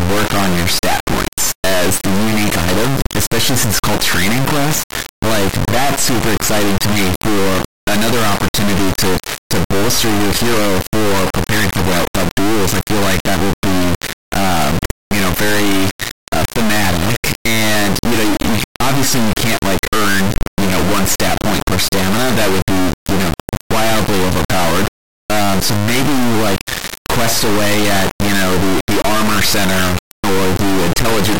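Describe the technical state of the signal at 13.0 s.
At 13.0 s the speech is replaced by an extremely loud, buzzing square wave that drops to silence in the quietest moments, and this persists across the whole clip. The sound points to integer read as float: 32-bit integer samples decoded as 32-bit float, producing near-zero or massively over-range values that slam between silence and clipping.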